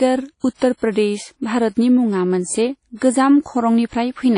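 Throughout, the speech carries ringing, washy hiss that swells with the signal, likely WMA compression at a rate pointing to about 32 kbps. The spectrogram shows nothing above 10.1 kHz. At 0.77 to 0.82 s and 0.92 to 0.96 s, pre-echo appears: block-spread quantisation noise smears hiss ahead of attacks, visible as haze in the waveform before each onset, 51 ms and 37 ms long.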